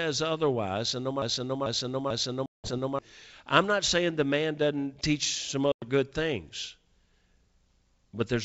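From 1.22 to 2.99 s the speech falls into a broken-record loop: a 0.44 s fragment repeats exactly four times back to back, and the audio that belonged in that span never plays before "I'm not saying the" arrives. This most likely comes from a stalled player or stream resending the last buffer it held.

Inside that stretch, at 2.46 to 2.71 s, comes packet loss on an ADPCM call. About 180 ms drops to silence with hard edges. The decoder's adaptive predictor and step size no longer match the sender's, so the sound resumes slightly distorted, then settles within some tens of milliseconds.

The same loss recurs at 5.72 to 5.88 s. A 100 ms hole is followed by the same short distorted recovery. Across the clip, the G.722 wideband coding carries the speech up to about 7 kHz with a light upper-band hiss.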